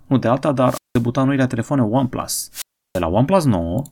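At 0.65 s, right after "nu de alta", the speech breaks up in a wireless microphone squelch dropout. The radio link fades, hiss swells, and the receiver's squelch shuts the output for about 0.18 s before "noile telefoane" resumes at 1.06 s. It recurs from 2.51 to 3.03 s with a longer mute of about 0.33 s. On a spectrogram, broadband noise brightens just before each gap, which then shows as a near-empty vertical band. The waveform flattens to almost nothing there.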